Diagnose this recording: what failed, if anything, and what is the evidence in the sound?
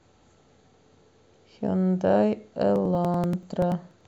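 From 2.76 s to 4.01 s the speech carries a rapid, evenly spaced ticking, one click every 0.096 s, about fifteen in all. These are periodic USB or driver dropouts: a stalled driver or buffer drops roughly 4 ms each time, skipped outright, leaving a splice.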